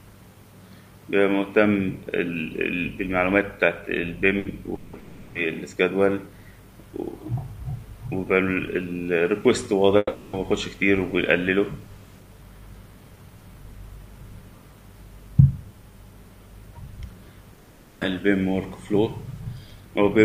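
At 4.39 to 4.48 s, a burst of packet loss cuts 60 ms. The last sound is held and fades, then the audio skips ahead.

At 4.75 to 4.96 s, 4.99 to 5.38 s, 9.97 to 10.36 s and 17.53 to 18.04 s, the sound turns into a fading held buzz or hiss. The audio then resumes with that stretch missing. The likely cause is a long network dropout. The one near 10 s ends in a brief silence.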